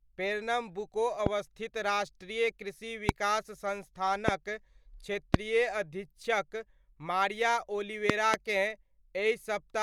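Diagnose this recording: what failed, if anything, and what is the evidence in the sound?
Loud pops at 1.26–1.29 s (just before "राष्ट्रीय कृषि"), 3.09–3.11 s, 4.28–4.31 s, 5.34–5.36 s (just before "अधीक्षक मारिया") and 8.10–8.36 s, the last a pair of pops right after "अधीक्षक मारिया". Each rises about 20 to 25 dB above the speech, which continues unbroken beneath them. The stage is likely the analogue wiring: an intermittent connector, switch or static discharge injects voltage steps that the following circuitry shapes into brief thumps.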